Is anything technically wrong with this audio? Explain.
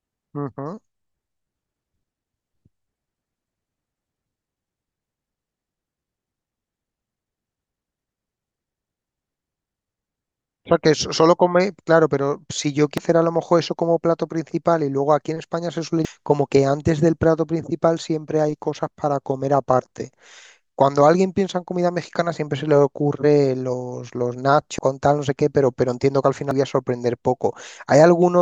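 Yes, there's damaged data in a compressed stream: short glitches at 12.98–13.01, 16.05–16.08, 24.78–24.82 and 26.51–26.54 s, where corrupted frames threw the decoder off until it resynced.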